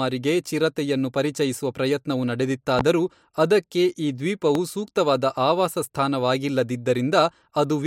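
Speech with two loud pops, at 2.79–2.83 s after "ಚಿರತೆಯನ್ನು ಪರಿಚಯಿಸುವ ಪ್ರಯತ್ನವು" and 4.55–4.59 s after "ಅದಕ್ಕೆ ಈ", each roughly 15 dB above the speech and likely from a brief voltage glitch; each shows as a lone spike on the waveform and a thin full-height vertical stripe on the spectrogram.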